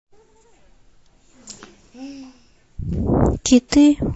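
Throughout the speech there is a watery, swirling quality, with metallic chirps on s sounds. This is likely MP3 compression, plainly audible and consistent with a low bitrate of around 40 kbps. Weak frequency content is being discarded and switching on and off between frames.

From 3.69 to 3.72 s a brief hiss rises about 14 dB just ahead of an attack, which then sounds softened and smeared. This is pre-echo. The encoder never switched to short blocks, so quantisation noise spread across a window of roughly 50 ms, reaching about 36 ms before the onset.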